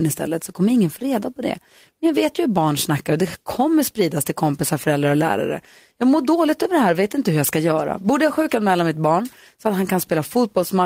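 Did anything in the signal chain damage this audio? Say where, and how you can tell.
Yes. Short concealed packet loss at 0.99 to 1.03 s on the network side, between "så kommer ingen få" and "reda på det". About 20 ms of speech arrived too late, and the receiver covered roughly 14 ms by extending the preceding sound before blending back, leaving a brief smear.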